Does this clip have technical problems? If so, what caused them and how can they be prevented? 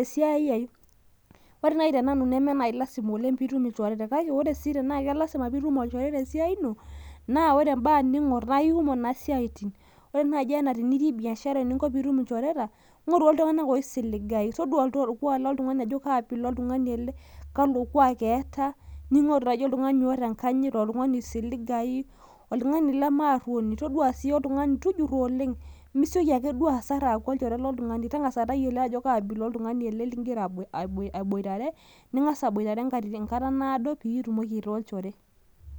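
No technical faults are audible.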